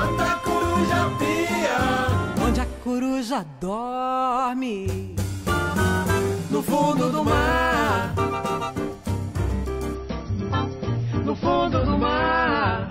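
Adaptive stream at a lower bitrate, from 9.95 s to the end: the player switched to a cheaper version of the same stream, likely because the connection slowed. The change is abrupt and leaves no gap. From that point nothing is present above 5.9 kHz, so the top end is gone, and coding artefacts grow more audible. The loss of detail points to a drop from an MP3 of about 128 kbit/s to one near 24 kbit/s.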